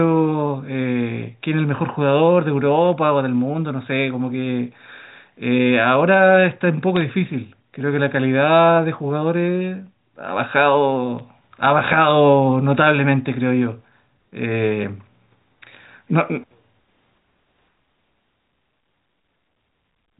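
Bit errors on the digital phone line flip occasional bits, corrupting single samples from 6.96 to 7.01 s and at 11.19 s.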